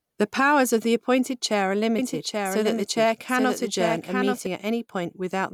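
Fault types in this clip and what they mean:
Doubled audio track: from 1.99 s to 4.47 s the speech is shadowed by a second full-band copy trailing about 0.7 s behind, a few dB quieter, dry and starting and stopping abruptly, likely from the same signal being captured again through a slower path.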